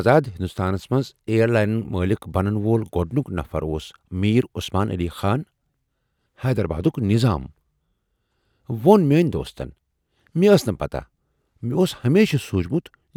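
No technical faults can be heard anywhere in the speech recording.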